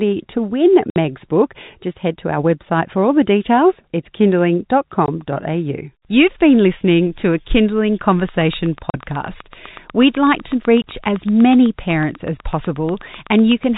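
Packet loss filled with silence cuts the speech at 0.90–0.96 s (60 ms) and 5.06–5.08 s (20 ms), leaving flat waveform gaps and blank spectrogram strips. The hole lengths fit 20 ms packets. From 8.29 to 13.65 s, a train of clicks ticks regularly about eight times a second, roughly forty in all, peaking around 5 dB above the speech. It shows as thin vertical broadband lines and is likely interference from nearby equipment. Within that stretch, further silent dropouts hit 8.90–8.94 s (40 ms) and 10.82–10.84 s (20 ms). Throughout, the G.711 A-law telephone band tops out at 4 kHz.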